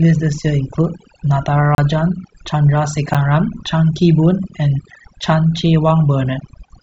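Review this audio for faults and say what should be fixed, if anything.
Overdone noise removal runs through the whole clip. The noise reduction was set too aggressively, so individual frequency bands that came near its noise estimate were pushed far down or switched off, taking the quieter parts of the speech with them. The result is a background that drops and breaks up into twinkling, chirpy specks. Prevent it by lowering the reduction amount and checking the result on the quiet passages.

There are two blocks of digital silence, from 1.75 to 1.78 s (32 ms) and at 3.14 s (about 11 ms). In each, the output buffer likely went unfilled and a run of samples dropped out with no fade, so the signal cuts abruptly to silence and back. The longer gap is heard as a short hole, and the shorter one as a tick. Its length fits a 512-sample buffer. Prevent it by giving the audio path more buffer headroom so every block is delivered on time.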